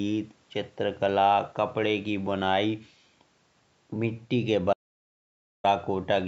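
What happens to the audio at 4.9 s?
At 4.9 s there's an audio dropout to silence, from 4.73 to 5.64 s. The input likely cut out, leaving silence with no room tone.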